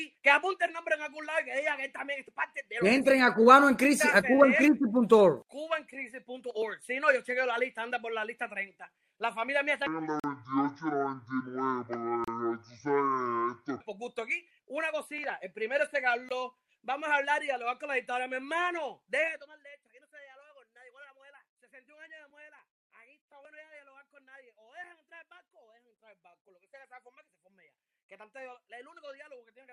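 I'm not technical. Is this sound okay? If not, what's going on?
No. From 9.86 to 13.81 s the sound drags and drops deep, running at a bit over half speed (0.56 times) and sitting roughly ten semitones lower, close to an octave. That is a section at the wrong speed. Speed and pitch sink together, so the likely cause is that this stretch was played or edited against the wrong clock.

There are also brief, hard-edged holes of silence at 10.20 s (42 ms), 12.24 s (33 ms) and 16.29 s (19 ms). Each is a gap between stream segments. The audio arrives in chunks, and here the timing of neighbouring chunks doesn't quite line up, so the player fills the space with silence. The spacing between the holes fits chunks about 2 seconds long. Nothing is actually missing. The sound just pauses for a moment.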